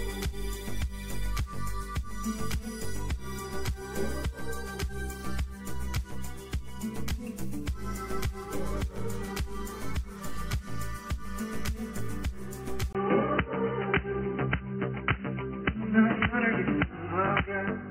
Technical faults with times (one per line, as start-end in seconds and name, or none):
12.93-17.90 input switched to a poorer device